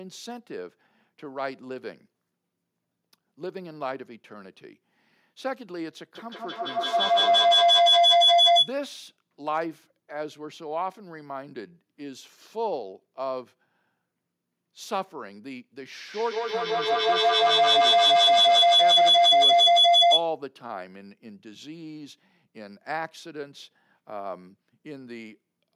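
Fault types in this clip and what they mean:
Feedback howl: The microphone picks up its own loudspeaker output, and each trip around that loop comes back louder, so the repeats swell and narrow to a tone around 700 Hz. It happens at 6.15 to 8.8 s and 16.13 to 20.34 s, peaking about 13 dB above the speech. A spectrogram shows a bright horizontal line near 700 Hz. The waveform shows a rising envelope, with the loop repeating roughly every 150 ms.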